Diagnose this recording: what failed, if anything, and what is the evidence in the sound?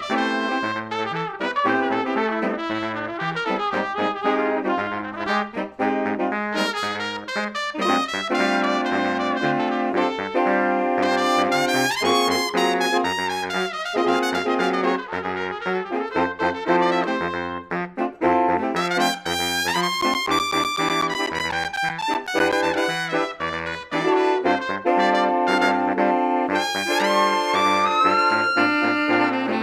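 Periodic USB or driver dropouts at the driver or buffer stage: from 20.01 to 22.53 s, about twenty regular ticks sound every 0.125 s. A recurring stall blocks the driver, so roughly 10 ms of audio is lost each time and filled with silence.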